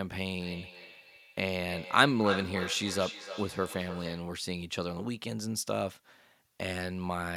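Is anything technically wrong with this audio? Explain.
Yes. From 0.37 to 4.41 s the speech is shadowed by a delayed copy of itself, returning roughly a third of a second after each word and peaking at about 9 dB below the direct speech. This is feedback echo between two devices: two devices in the same room share the call, one plays back what the other's microphone sent, and that microphone captures it again. Each echo canceller removes only its own device's playback, so the copy survives.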